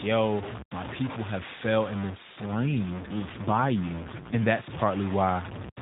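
From start to finish the speech carries a coarse, grainy distortion that tracks the signal and is only about 10 dB below it. It is likely low bit depth without dither: truncation to about 5 bits, with the error following the waveform and quiet passages dropping to silence or sputtering between steps.

From 2.46 s to 4.49 s an AMR rate drop sets in. Within the unchanged sub-4 kHz AMR narrowband band, the voice turns rougher, buzzier and more synthetic, consistent with the codec stepping down from 12.2 to 5.9 kbps, then recovers.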